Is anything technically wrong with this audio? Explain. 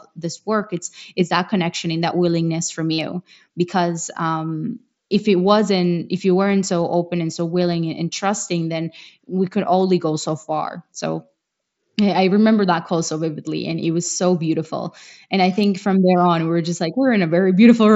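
Yes. Concealed Bluetooth headset packet loss occurs twice in this speech. At 2.94 to 2.98 s, between "and that willingness from" and "because um if it", about 45 ms of headset voice packets failed to arrive, which fits six lost frames, and the phone filled the gap by repeating the best-matching recent stretch of waveform. That run is heard as a short buzzy tone at full level, with a slight warble as real speech resumes. At 14.05 s, between "so vividly and it" and "so beautiful", a shorter 15 ms loss was patched the same way. The link carries wideband mSBC, consistent with a bitrate near 61 kbps, and it adds only light graininess.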